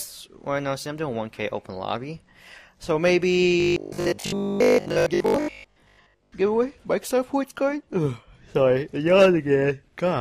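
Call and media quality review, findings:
Robotic sound from repeated short buffers, 3.60 to 6.32 s. Rigid metallic buzz at 50 Hz; the original is followed only roughly. Likely cause: starved playout buffer repeating the last 20 ms for roughly 70% of the span, skipping real audio.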